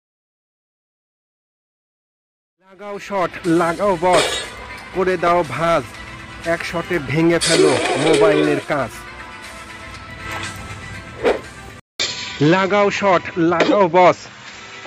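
The fade-in from around 2.5 s to 3.93 s is just an editor's fade. At 11.80 s there's a 200 ms gap, then the sound goes dull with nothing above 7.6 kHz and a fresh noise floor well underneath, likely an input switched to a poorer device. The level stays about the same through to the end.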